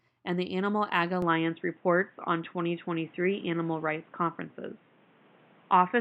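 At 1.22 s the sound abruptly goes dull and boxy and stays that way to the end. From that point nothing comes through above 3.8 kHz, the level shifts by about 5 dB, and a new noise floor sits roughly 35 dB under the speech. There's no gap at the changeover. That's the signature of an input switched to a poorer device, likely a headset call profile or a cheaper mic taking over mid-recording.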